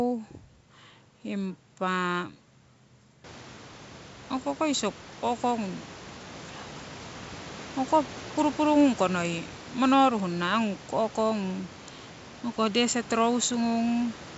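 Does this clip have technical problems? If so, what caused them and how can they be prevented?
No, the speech is carried by G.722 wideband telephone coding at 64 kbit/s with its band up to about 7 kHz, and the room noise, which rises by about 19 dB around 3 s, stays about 21 dB below the speech.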